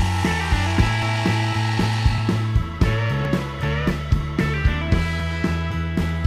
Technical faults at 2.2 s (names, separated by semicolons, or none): dropped buffer (overrun)